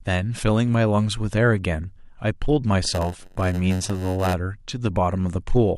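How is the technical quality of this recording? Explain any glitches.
The speech has one clear glitch. From 2.83 to 4.33 s a rough buzz at about 92 Hz rides under the speech, and the delivery drags slightly, running at roughly 0.92 of normal speed. This is a block size mismatch (padded). One processing stage hands over blocks a little shorter than the next stage expects, and the missing part of each block is filled with silence. Those tiny gaps repeat about 92 times a second, which produces the buzz. The added silence also stretches the timing by the ratio of the two block sizes, so the speech slows while its timbre stays the same.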